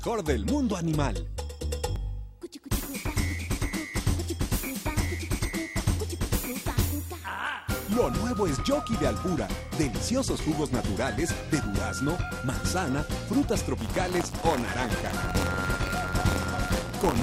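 From 13.78 s to the end, the sound takes on a robotic buzz at 93.8 Hz, which fits a 512-sample buffer. This is buffer tearing: a small slice of each period replays audio from a few tens of milliseconds earlier. Unlike underrun dropouts, it leaves no silent gaps and buzzes only while signal is present.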